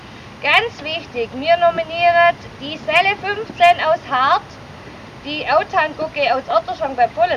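Linear timecode from a neighbouring track or cable leaks into the audio path for the whole clip, which is timecode bleed. Its square wave flips between tones near 1 and 2 kHz, heard as a steady chirping warble about 30 dB under the sound, fitting 23.976 fps code.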